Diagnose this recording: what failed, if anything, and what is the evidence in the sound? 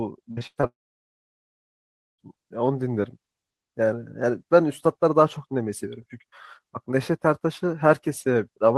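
The network stage failed first. From 0.31 to 0.65 s the speech turns choppy and robotic. This is repeated packet loss: four gaps, the longest 105 ms, about 200 ms missing in total. Each hole is patched by extending the previous sound, so more than half of that stretch is synthetic.

Next comes a long network dropout. From 0.67 to 2.2 s about 1.5 s of audio never arrives. A brief smeared continuation fades, then roughly 1.46 s of silence follows. Speech resumes at 2.2 s without the missing part. The cause is likely a network outage.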